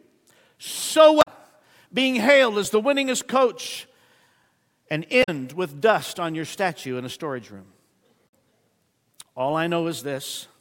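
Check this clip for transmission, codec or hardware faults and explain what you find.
The speech has three short bursts from damaged data in a compressed stream: 1.21 to 1.28 s, 5.20 to 5.29 s (just before "with dust on your"), and 8.25 to 8.30 s. Corrupted frames make the decoder misread data and lose sync until it finds the next valid header, giving brief chirps or blips.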